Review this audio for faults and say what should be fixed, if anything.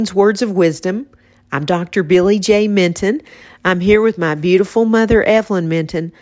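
Nothing stood out on listening, so there is nothing here that needs fixing.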